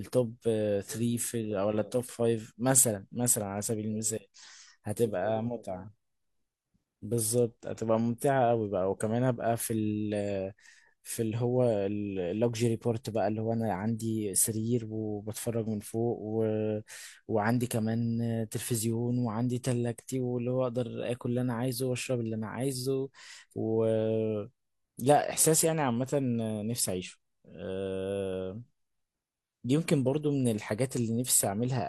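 A speech recording, and nothing in it is technically wrong.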